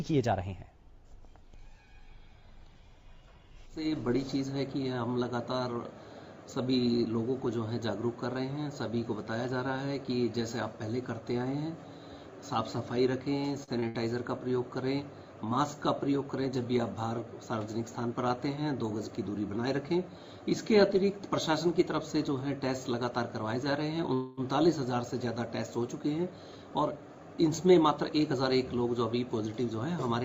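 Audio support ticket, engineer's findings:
Held sound at 13.63 s and 13.80 s, about 43 ms and 25 ms, slight buzz. Short stall from a late packet, twice. Jitter buffer ran dry. Receiver stretched the last sound, resumed at the same point. Nothing lost, delay grew.

Burst of packet loss at 13.88 to 13.97 s. Gap concealed with a fading continuation of the preceding sound, then a jump forward. About 60 ms of audio gone. Receiver-side concealment over consecutive lost packets, directly after the two stalls.

Call audio freeze, 24.14 to 24.40 s. Sound held as a decaying buzz for about 232 ms, never reaching silence. Likely cause: packets delayed in transit, emptying the jitter buffer. Playback resumed where it stopped. Nothing skipped, only a gap inserted.

Hurried playback, 26.18 to 28.34 s, running at 110% with pitch unchanged. Jitter buffer speed-up. Buffer overfilled, probably after the delayed packets arrived together. 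Receiver trimmed many short pitch-period slices, roughly a fifth of a second in total, to cut the added latency.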